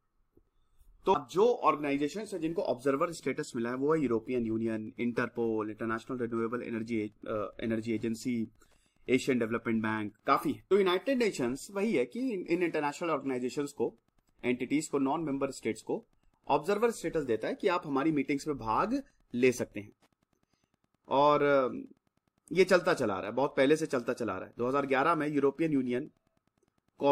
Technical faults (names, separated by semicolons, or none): Wi-Fi interference